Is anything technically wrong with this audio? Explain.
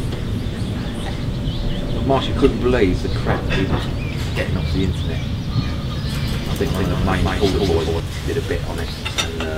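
Yes. From 6.16 s to 8.0 s there is a doubled audio track: a second full-band copy trails the original by about a fifth of a second at roughly equal level, with no decay, and starts and stops abruptly. The likely cause is a second, slower capture path or a misaligned edit.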